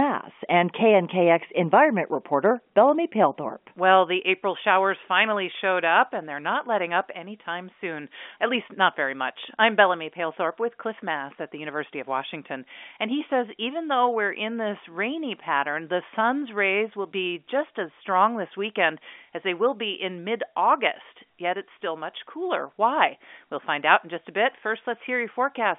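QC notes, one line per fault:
No faults are heard in this speech clip. It carries the band-limited sound of G.711 telephone coding, with the line spanning about 200 Hz to 3.5 kHz and a faint quantisation hiss that rises and falls with the speech level, which fits a 64 kbps A-law line.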